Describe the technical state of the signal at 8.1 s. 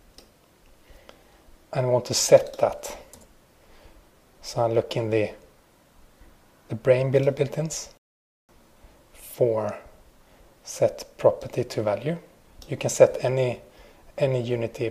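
At 8.1 s the sound is halted by a rebuffering stall, running from 7.97 s to 8.49 s. The player exhausted its downloaded audio and paused until more data arrived, leaving about 0.51 s of silence. What separates this from a dropout or packet loss is the resumption: the audio picks up exactly where it stopped, with nothing skipped or missing. The stall inserts time into the clip rather than removing any of its content.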